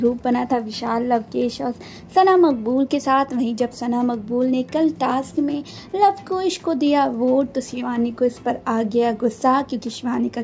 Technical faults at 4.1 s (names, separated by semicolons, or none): none